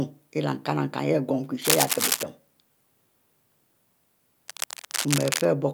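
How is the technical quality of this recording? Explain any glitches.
Two bursts of cable scratch noise spoil the recording. From 1.62 to 2.24 s, right after "gomu kie", dense, uneven scratching sits about as loud as the speech. From 4.48 to 5.45 s it returns, somewhat quieter. The likely cause is a worn cable or connector being moved, its contact resistance jumping rapidly.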